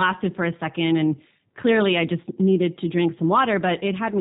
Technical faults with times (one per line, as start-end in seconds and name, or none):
0.00-4.20 G.729 codec